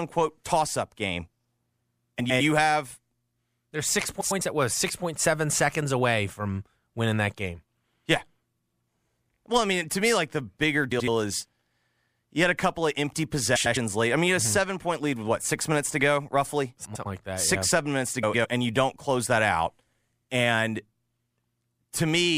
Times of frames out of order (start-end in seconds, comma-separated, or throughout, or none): 2.19-2.41, 4.20-4.42, 10.91-11.08, 13.55-13.77, 16.84-17.06, 18.23-18.45